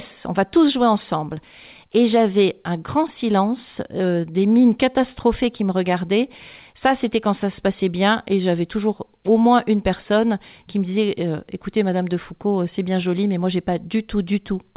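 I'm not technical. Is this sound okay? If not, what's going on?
Yes, nothing wrong can be heard in this speech.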